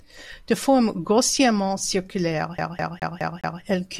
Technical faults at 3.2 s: CD stuck on one turn

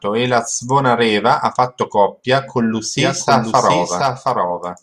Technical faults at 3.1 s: doubled audio track

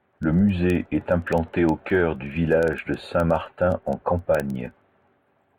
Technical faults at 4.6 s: word clock ticks

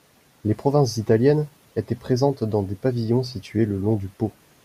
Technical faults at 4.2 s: none

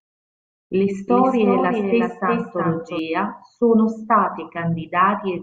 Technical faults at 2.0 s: doubled audio track

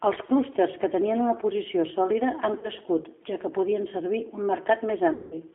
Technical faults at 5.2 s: G.729 codec; VoIP packet loss concealed by the speech codec

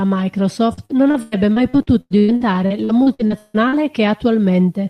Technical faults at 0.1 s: none

